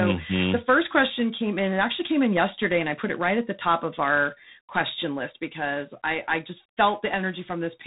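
A harsh, rasping hiss rides on the speech from start to finish, swelling and fading with its level, and nothing above 3.8 kHz comes through. This is G.726 ADPCM coding: each sample carries only a few bits of difference from a prediction, which fits the 24 kbit/s rate.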